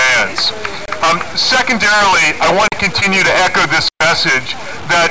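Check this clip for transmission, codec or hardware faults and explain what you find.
Several faults are present: heavy quantisation grit throughout, three dropouts to digital silence, and one concealed gap from the call link, which carries the audio through G.722 at 64 kbps with nothing above 8 kHz.

Low bit depth without dither runs through the whole clip. The signal was likely cut to very few bits, which fits 4-bit truncation with no dither. The rounding error tracks the sound, sitting only about 20 dB below it, so everything is grainy and the quietest parts sputter or fall silent.

Blocks of digital silence occur at 0.86 to 0.88 s (25 ms), 2.68 to 2.72 s (40 ms) and 3.89 to 4.01 s (120 ms). The output buffer was most likely not filled in time, so the audio dropped straight to silence and returned without a fade. The first two sound like short holes, and the last is a longer audible hole.

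Short concealed packet loss occurs between 3.00 and 3.11 s. About 20 ms of audio failed to arrive in time, and the receiver extended the preceding sound to cover it before blending back into the real signal. This is heard as a brief smear or wobble lasting a few hundredths of a second.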